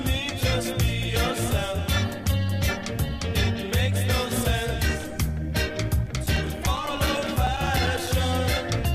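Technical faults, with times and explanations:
6.06–8.07 s: periodic USB or driver dropouts. Every 0.1 s, a few milliseconds of audio drop to silence, giving a steady train of ticks while sound plays.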